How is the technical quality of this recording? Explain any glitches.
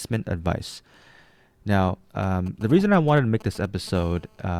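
Two stretches of mobile-phone interference spoil the end of the speech.

From 2.23 to 3.89 s there are GSM signalling bursts: a 2G handset close by fires short groups of radio bursts while it signals, and the audio circuitry rectifies them. You get a galloping dit-dit-dit of brief 217 Hz buzzes, roughly 20 dB below the speech.

Then from 3.95 to 4.55 s it turns into a steady GSM phone buzz, the phone now in a call and transmitting 217 times a second. That rectified pulse train gives a hard, raspy 217 Hz buzz full of harmonics, about 28 dB under the speech and unrelated to it.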